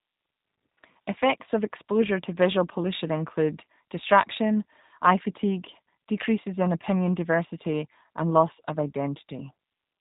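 Throughout the speech, the G.729 codec leaves a plainly audible imprint: nothing above 4 kHz survives, and each 10 ms frame is resynthesised from a few pulses driving a vocal tract model. The result is band-limited, buzzy and slightly artificial, consistent with 8 kbit/s G.729A.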